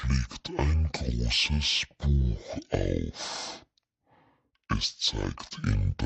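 A speech recording runs at half speed from start to finish, an octave low. The pitch sits 12 semitones below where it belongs. Every syllable is drawn out to twice its length. The fault is stereo read as mono. Left and right samples were interleaved in the file, but the player took them as one channel in sequence. Each stereo frame became two mono samples, doubling the duration. A fainter mirrored copy of the sound also shows in the upper half of the spectrum.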